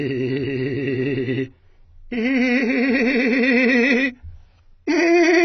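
Throughout the music, nothing is heard above 6 kHz, and sustained tones warble and fizz; this is heavy AAC compression, likely at a very low bitrate near 16 kbps.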